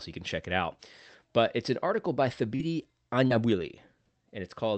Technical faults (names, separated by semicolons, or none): short concealed packet loss